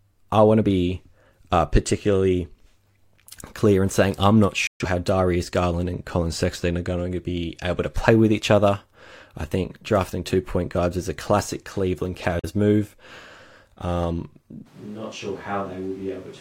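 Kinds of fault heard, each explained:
digital broadcast dropout: The receiver stopped getting usable frames and muted until good ones arrived again. Here the sound cuts out twice, each time with a very fast fade of about 3 ms. The first hole runs from 4.67 to 4.85 s, and its length fits roughly three lost frames. The second, from 12.39 to 12.50 s, is shorter, about 43 ms, which fits a single frame. Whatever was sent during those gaps is gone.
switch to a distant microphone: From 14.68 s to the end of the clip, the voice suddenly turns roomy and hollow, with thinner bass. It drops by around 10 dB. Background noise comes up to sit roughly 25 dB under the speech. The change is abrupt and it never switches back. The likely cause is that the close microphone failed or was dropped, leaving a microphone further away, such as a camera's, carrying the recording.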